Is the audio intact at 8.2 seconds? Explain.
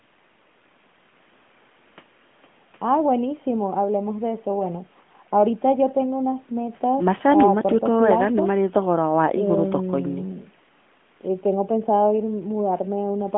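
Yes, the audio is intact at 8.2 seconds: the speech there carries only the narrow, phone-like band of a mobile call, with nothing dropping out or breaking up.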